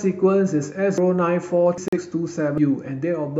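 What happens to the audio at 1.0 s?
At 0.98 s the speech skips: audio missing between chunks, with about a fifth of a second likely lost as one 1-second chunk closed and the next opened. The edges are spliced directly, so no silent gap is heard, unlike a dropout.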